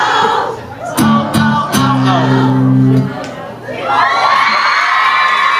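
The gain keeps ducking sharply whenever something loud arrives, so the level breathes in and out for the whole clip. Loud and quiet moments sit unnaturally close together, and the audio sounds flattened and squashed. This is gain pumping, with a swing of roughly 15 dB. It is likely caused by the input gain being set far too high for the microphone, with a fast limiter or compressor clamping down on each peak and releasing in the pauses.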